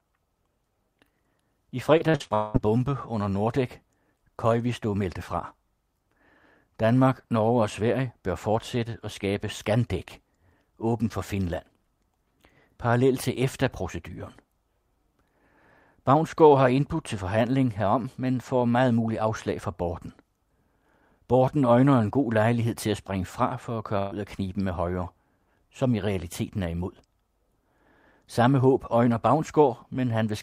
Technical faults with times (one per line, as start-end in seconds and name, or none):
1.97-2.56 repeated packet loss (robotic sound)
23.98-24.13 burst of packet loss